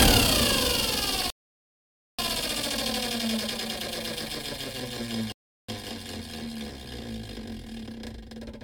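At 1.30 s the sound drops abruptly into silence and stays there until 2.19 s, then picks up precisely where it broke off, with nothing skipped. This is a rebuffering stall: the player used up the audio it had already downloaded and had to wait for more to arrive before continuing. No content is lost, but the gap adds about 0.88 s to the running time.

A second, shorter break comes at 5.32 s, when the sound cuts out in mid-flow and returns at 5.69 s after roughly a third of a second of silence. This is a playback stall. The likely cause is that the output briefly went without data, either from an empty buffer or a blocked playback thread, so nothing reached the speakers until the player recovered.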